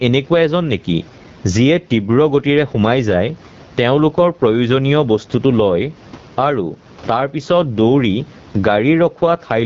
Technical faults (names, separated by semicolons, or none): gain pumping; AMR wideband (HD Voice) codec